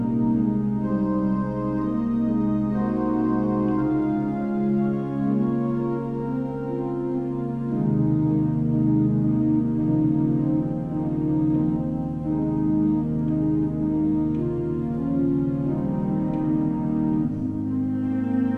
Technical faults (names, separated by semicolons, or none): none